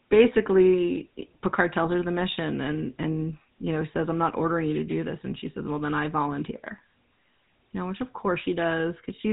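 A buzzy, gravelly roughness runs through the whole speech clip, with nothing above about 3.8 kHz, the plainly audible mark of the GSM full-rate codec, consistent with a 13 kbps stream. It models the vocal tract and drives it with sparse, regularly spaced pulses.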